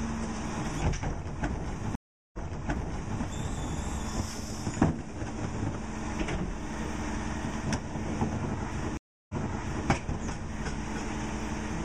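The audio suffers two stream reconnects. At 1.95 to 3.21 s it drops to silence for about 0.38 s, then resumes 0.88 s earlier than where it broke off. At 8.97 to 9.89 s a 0.32 s silence is followed by a jump back of 0.60 s. In each case the connection failed, a fresh decoder started mid-stream, and the server resent a burst of earlier audio. That repeated material is what separates this from an ordinary dropout, which leaves a gap but never replays what came before it.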